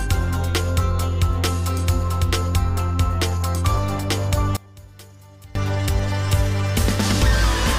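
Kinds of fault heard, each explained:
One channel inverted: from 4.57 to 5.55 s the audio sinks by about 24 dB, likely from one channel's reversed polarity cancelling shared content in the mono sum.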